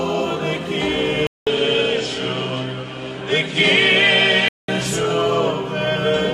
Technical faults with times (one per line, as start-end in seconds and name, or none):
1.27-4.68 input switched to a poorer device